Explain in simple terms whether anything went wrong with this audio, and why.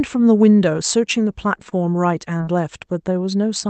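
Two kinds of glitch come up in this speech, both from the network.

At 1.69 to 1.73 s there is a short stall from a late packet. One piece of the call arrived late. The receiver held the last sound for about 20 ms while it waited. Nothing is lost, but that sound lasts a touch too long.

At 2.37 to 2.41 s and again at 2.45 to 2.49 s there is short concealed packet loss. Each time about 20 ms of the call never arrived. The receiver covered each gap by continuing the last sound before it. You hear two quick smears or wobbles close together.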